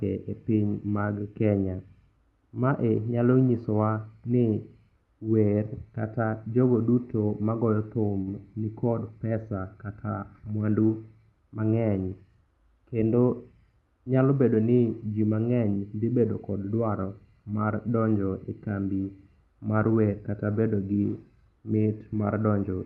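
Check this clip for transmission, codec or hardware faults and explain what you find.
One transmission fault stands out, a short stall from a late packet, heard over a call path whose top end stops near 12 kHz, which fits a typical Opus setting at around 32 kbps. The stall runs from 8.21 to 8.42 s. A packet arrived late and the jitter buffer ran dry. The receiver held the last sound for about 53 ms until the packet came. Nothing was lost, so the speech resumes where it stopped. What you hear is one sound drawn out too long, with a faint buzz or dip.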